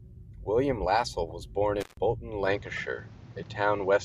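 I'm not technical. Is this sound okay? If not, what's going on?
No, there are three different problems in this speech clip.

The first is repeated frames. Audio is stored in small chunks, here about 26 milliseconds each. Twice, one chunk got played a second time. This happens at 1.29 s and again at 2.76 s. Each time you hear a tiny stutter, like a skip on a scratched disc. There may be a small click where the copy joins. Each repeat also makes the clip about 26 milliseconds longer.

The second is an intermittent contact. Something like a loose plug or cable briefly lost its connection. From 1.80 s to 1.97 s the speech drops out for roughly a seventh of a second. You hear a crackle as the connection breaks and again as it comes back. In between there is only faint hiss.

The third is an input switched to a poorer device. At 2.47 s the sound changes character and stays that way to the end. 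Nothing above 7.6 kHz gets through, so the voice sounds duller and less crisp. The volume shifts a little. A faint new background noise appears. There is no gap at the change. The likely cause is the recording switching over to a different, lower-quality microphone partway through.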